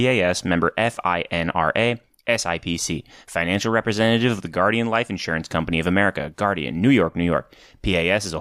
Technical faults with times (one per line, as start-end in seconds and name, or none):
6.24-8.41 sample clock jitter